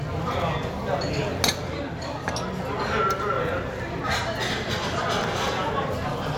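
Chunks out of order at 0.34–0.42 s and 5.40–5.48 s: a 20 ms chunk plays three chunks late, jumbling the sound briefly with three hard joins.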